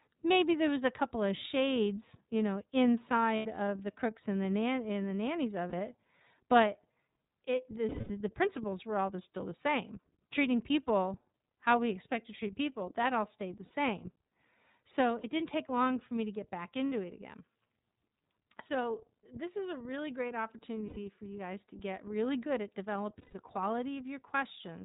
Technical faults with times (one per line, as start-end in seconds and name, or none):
0.00-24.85 iLBC codec
3.36-3.46 lost iLBC frames
5.70-5.73 lost iLBC frames
7.89-8.11 lost iLBC frames
13.65-13.71 lost iLBC frames
15.21-15.25 lost iLBC frames
16.88-16.92 lost iLBC frames
20.88-20.97 lost iLBC frames
23.19-23.35 lost iLBC frames